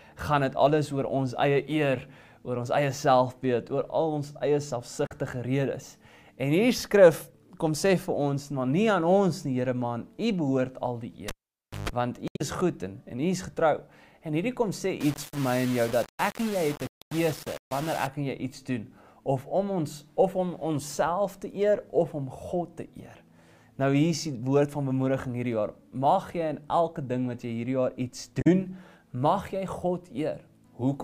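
The audio has three kinds of fault. Damaged data in a compressed stream causes brief glitches at 5.05 to 5.12 s, 12.25 to 12.41 s and 28.41 to 28.47 s. Bad frames made the decoder lose sync and hunt for the next header. The middle one adds about 24 ms to the timeline.

At 11.28 s a cable is pulled and plugged in again. A pop opens a gap of about 0.56 s. A 50 Hz mains buzz then sounds for about 143 ms as the plug makes partial contact, and a second pop at 11.89 s brings the sound back.

From 15.0 to 18.07 s the sound turns grainy and harsh, with distortion that tracks its level. Quiet parts break up most. The likely cause is low bit depth without dither, about 5 bits with plain rounding. That leaves the error only about 15 dB below the signal.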